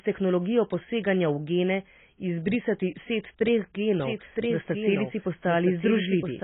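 From the first moment to the last, the speech is dull and narrow. Nothing survives above 3.8 kHz. Sibilants lose their edge and turn fizzy. Sustained vowels warble and smear. The damage is heavy. This is likely AAC compression, the AAC-LC kind, run very lean. The coder drops the top of the band and starves the rest, leaving holes and substitute noise. The sound fits a bitrate near 16 kbps.

At 4.00 s a second copy of the speech cuts in abruptly. It runs until the clip ends. This is a doubled audio track. The copy trails the original by about a second. It sits a few decibels below it. It is full-band, with no decay and no room colour, so it reads as plain overlapping speech, not an echo. The likely cause is a second capture path, or an edit that left two copies out of step.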